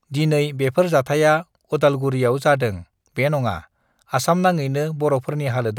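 Bit error spikes at 4.26 s and 5.29 s: a flipped bit in memory or a digital link throws one sample, then two adjacent ones, off by a power of two before snapping back. Each is a sharp, broadband tick unrelated to the speech, peaking around -10 dBFS and then about -22 dBFS.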